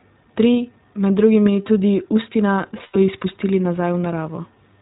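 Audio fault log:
throughout: iLBC codec. The speech is band-limited, with nothing above 4 kHz, so sibilants and consonant edges sound dull and boxed in. A plainly audible rough, slightly synthetic grain runs through every syllable because the codec models each short block's excitation separately rather than carrying detail forward. The block structure points to 20 ms frames, and the overall quality fits iLBC's 15.2 kbps mode, a narrowband setting built for intelligible telephony rather than fidelity.
2.84 to 2.97 s: lost iLBC frames. About 100 ms of audio went missing, which fits roughly five 20 ms frames. The decoder covered the gap by looping the last pitch cycle it had and blending in noise, so the speech turns into a brief held, faintly buzzy, breathy vowel instead of falling silent. Each iLBC frame decodes without depending on the one before, so the speech snaps back almost immediately once packets arrive again.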